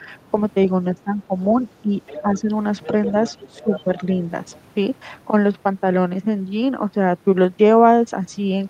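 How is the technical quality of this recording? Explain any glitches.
The recording has clear echo-control problems. There are two kinds of glitch, and they overlap.

Speech suppressed in double talk appears at 0–0.08 s and again from 0.94 to 4.18 s, where about a second in total is lost. The level dips by about 5 dB and then about 10 dB. This is likely the echo canceller turning down both sides at once. On the waveform it shows as notched envelope dips, and the spectrogram thins in the upper bands.

The other side's voice leaking through happens at 2.07–2.21 s, 2.80–3.83 s and 4.51–4.56 s. It sits about 15, 10 and 30 dB below the speech, and is likely residual loudspeaker echo. On the spectrogram it appears as faint, separate harmonic traces underneath the main speech.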